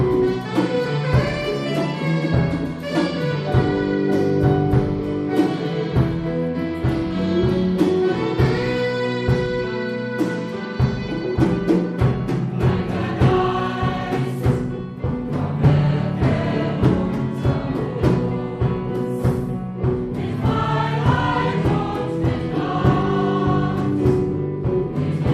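No technical faults can be heard anywhere in the audio.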